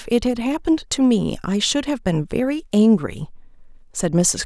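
No technical faults occur at any point in the speech recording.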